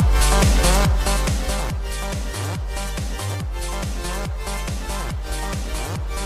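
Nothing here trips any alarm; the sound just rolls along with no technical trouble to point at.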